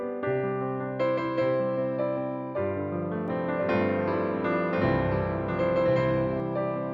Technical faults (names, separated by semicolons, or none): doubled audio track